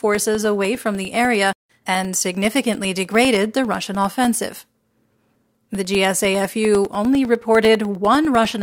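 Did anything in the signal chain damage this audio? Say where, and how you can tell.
Yes. The damage is at the USB or driver stage. From 0.15 s to 8.55 s the speech has periodic USB or driver dropouts, with a tick every 0.1 s, about a hundred in all. A recurring stall on the bus or driver blanks roughly a millisecond each time.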